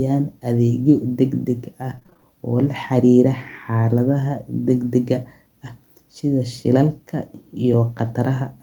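Speech, with a burst of repeated packet loss (robotic sound) from 1.95 to 2.24 s. Short holes, the longest about 20 ms, follow one another closely. Each is papered over by stretching the preceding sound, so about 44% of that stretch is concealment, giving a choppy texture with pieces missing. Unlike a single dropout, the damage is a rapid chain of small patched gaps rather than one clean silence.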